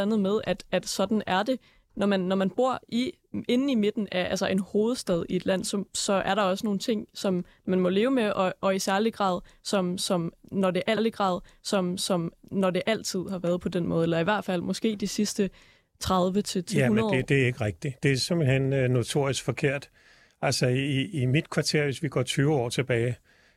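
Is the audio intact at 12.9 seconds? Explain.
No. At 12.9 seconds the speech is inside a stream segment repeat running from 10.96 to 12.96 s, where the player queued the same segment twice, so about 2.0 s of speech plays a second time, adding that length to the clip, with a small blip at the jump back. Unlike a stutter or buffer loop, which repeats only a tiny fragment many times, this repeats one whole chunk exactly once before the speech continues.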